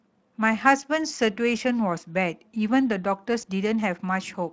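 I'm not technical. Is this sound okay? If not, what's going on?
No. At 3.41 to 3.44 s there is VoIP packet loss concealed by the speech codec: about 20 ms of speech went missing, and the decoder briefly filled the gap with a guessed, fading blur of the preceding sound.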